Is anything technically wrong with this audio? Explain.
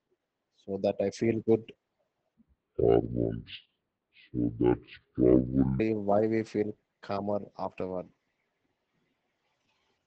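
Yes, there are two faults in this speech clip.

Opus voice compression runs through the whole recording. The coder appears to be working in its SILK linear-prediction mode at wideband, and nothing is present above 8 kHz. SILK models the voice as a filter driven by an excitation signal. At a rate that fits roughly 12 kbps, that excitation is quantised coarsely, so the damage is plainly audible. The voice sounds muffled and hoarse, with a faintly robotic edge.

A section at the wrong speed runs from 2.35 s to 5.80 s. That stretch plays at about 0.6 times its original rate, and speed and pitch drop together. The pitch falls by roughly ten semitones, so the voice turns deep and drawn out, then snaps back to normal at the end of the section. This is likely caused by an editor or player resampling that segment against the wrong clock.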